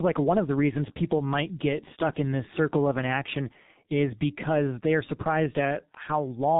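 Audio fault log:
Throughout: tandem speech coding. The speech passed through AMR-NB at 10.2 kbit/s, then G.711 mu-law, then G.723.1 at 6.3 kbit/s, decoded and re-encoded at each link. Two low-rate coders compound their errors, leaving rough, muffled, warbly speech with nothing above 3.8 kHz.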